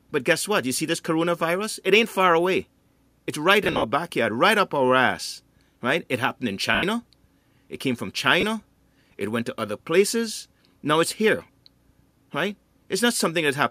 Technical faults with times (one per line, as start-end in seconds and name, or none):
3.64-3.84 lost LE Audio frames
6.75-6.83 lost LE Audio frames
8.41-8.43 lost LE Audio frames
13.17-13.20 lost LE Audio frames